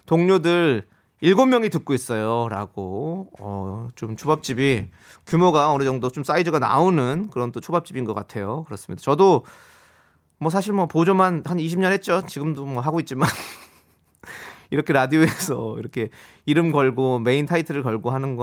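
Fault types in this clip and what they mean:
Nothing here to list: the speech comes across with no dropouts, glitches or other technical faults to point to.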